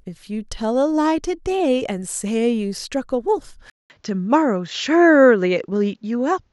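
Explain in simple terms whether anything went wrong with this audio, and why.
Yes. At about 3.70 s the recording most likely had its input switched to a poorer device, such as a different microphone or a headset's lower-quality call mode. There is a short gap of about 0.2 s at the switch. From then to the end, the speech loses its brightest, crispest parts, with nothing above about 7.6 kHz, so it sounds duller and boxier. A faint new background noise appears, while the loudness stays about the same.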